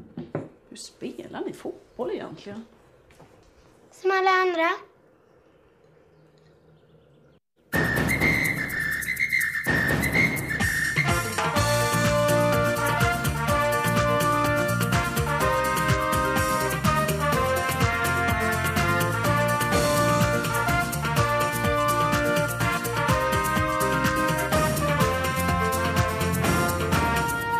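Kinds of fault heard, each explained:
Corrupt frame decoded: at 8.76 to 8.80 s, a short burst of roughly 40 ms of misplaced energy, peaking around -15 dBFS. Damaged bits inside compressed frames were decoded as if valid, so scrambled gain values and spectral codes put energy at the wrong frequencies. The burst's length suggests a run of a few consecutive frames was hit, each playing back its own garbled contents.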